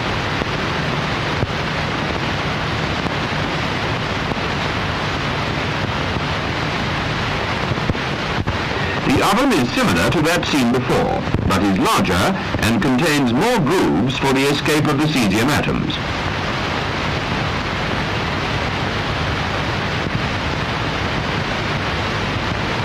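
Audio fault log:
Throughout: block size mismatch (truncated). A steady 43.1 Hz buzz, fitting 1024-sample blocks, from each block's end being discarded; pitch and speed stay normal, with no silent gaps.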